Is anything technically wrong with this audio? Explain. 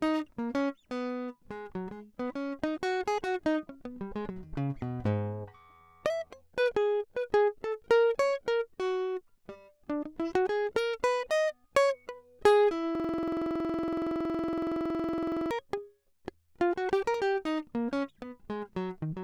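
Yes. A system hang loop runs from 12.95 to 15.51 s: the system froze while the sound hardware kept replaying one 46.44 ms slice of the music, which fits a 2048-sample buffer. It repeats 55 times, a rigid 21.5 Hz stuttering buzz.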